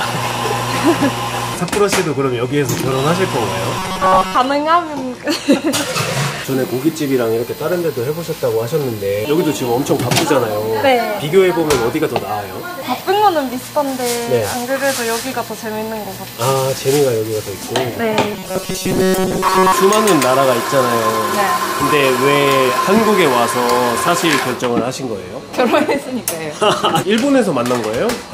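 At 2.77 s there's a loud pop, really a quick double pop lasting until about 2.93 s, landing roughly 10 dB above the surrounding level. That's most likely a voltage spike from a connector, switch or driver glitch hitting the line, and the sound underneath just carries on through it. You hear two sharp clicks stacked on the audio.

Then from 3.79 to 4.35 s, and again from 18.34 to 19.72 s, you get robotic sound from repeated short buffers. New audio isn't arriving fast enough, so the playback keeps looping the last little chunk, probably a block of about 5.3 ms, and most of the real material gets skipped. That looping stamps a steady 188 Hz buzz over everything, so the sound turns metallic and rigid while still loosely tracking its original shape.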